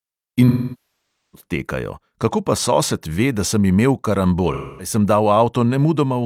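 AAC frame loss with concealment occurs twice as the decoder rebuilds missing frames from the last good spectrum. From 0.48 to 1.44 s, the long gap decays toward silence before fading back. From 4.53 to 4.93 s, just after "da sem imel", a shorter loss leaves a smeared, noisy patch.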